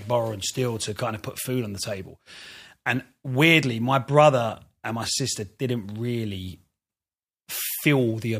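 No technical faults are audible.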